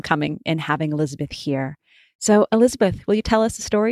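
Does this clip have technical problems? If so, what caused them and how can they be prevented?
No, the speech signal shows no technical faults that a listener can pick out, so there is nothing here to trace to a cause or prevent.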